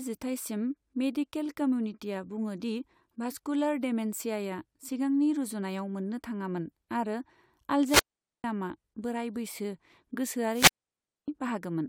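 Speech with two wireless microphone squelch dropouts (7.82–8.44 s, 10.52–11.28 s): fading radio signal trips receiver muting, leaving flat near-silent gaps of 0.45 s and 0.61 s, preceded by a brief rise of hiss.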